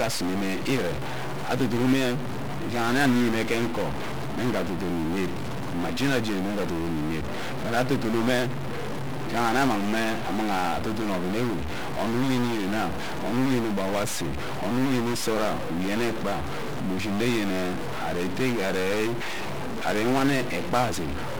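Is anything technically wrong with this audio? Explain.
Yes, two faults run through the whole clip.

Throughout, the speech is distorted, and the pauses fill with a steady noise floor instead of falling quiet. The likely cause is a stuck bit: one data bit held at a fixed value, shifting roughly half the samples by that bit's weight.

Also throughout, the audio is fuzzy and crackly, with the treble buried under broadband hiss. This is 1-bit DFPWM compression, where each sample is a single bit steering an adaptive level up or down. The heavy damage fits a rate around 48 kbps.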